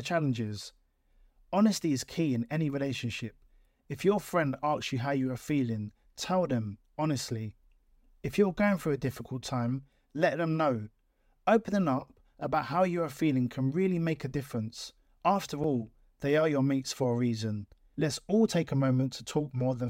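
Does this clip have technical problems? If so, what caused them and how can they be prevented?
Yes. At 15.64 s a repeated buffer causes a brief buzz. A tiny chunk, which fits a 64-sample buffer, replays four extra times because new audio arrived late. Larger buffers or higher audio-thread priority would prevent it.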